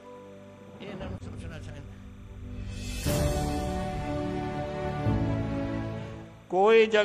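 A faint, steady chirping warble runs behind the sound throughout, well below it: timecode bleed, 29.97-frame linear timecode leaking in, flipping between tones near 1 and 2 kHz.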